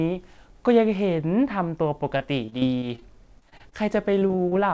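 From 2.18 to 3.03 s, 3.39 to 3.73 s and 4.19 to 4.53 s, repeated packet loss (robotic sound) chops the speech. Roughly 20 ms holes are patched by repeating the previous sound, giving choppy sound with pieces missing. On a spectrogram these appear as smeared, frozen slices, and nothing appears above 8 kHz because of the call path.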